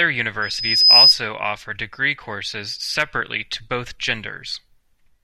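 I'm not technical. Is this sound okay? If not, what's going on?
No, there's a loudspeaker feedback squeal from about 0.42 to 1.15 s. The microphone is catching its own loudspeaker, and one high pitch near 5 kHz loops round and grows over roughly half a second into a piercing whistle, well above the speech.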